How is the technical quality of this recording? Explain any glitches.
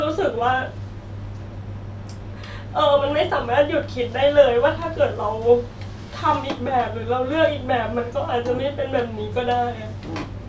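No glitches or faults can be heard anywhere here.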